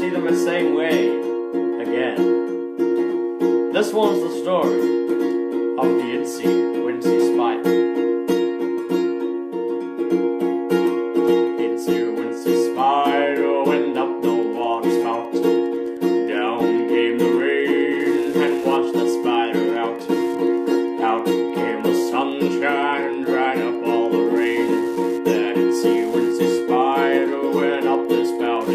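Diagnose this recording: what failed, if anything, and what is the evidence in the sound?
From 14.16 s to the end, a steady ticking sits under the sound, about ten clicks per second at a regular 102.4 ms spacing and roughly 30 dB below the programme. This is Wi-Fi interference at the analogue wiring stage. A nearby Wi-Fi radio sends a beacon on that fixed period. An unscreened input or cable picks up each burst, and a nonlinear junction in the circuit rectifies it into an audible tick.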